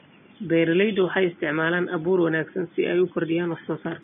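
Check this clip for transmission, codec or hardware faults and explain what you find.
One codec fault runs throughout the clip. The treble of the speech is hissy and grainy, with roughened tones and smeared attacks. The likely cause is Vorbis compression at a rate near 20 kbps, where coarse residue quantisation swaps fine high-frequency detail for noise. Room noise sits about 42 dB below the speech.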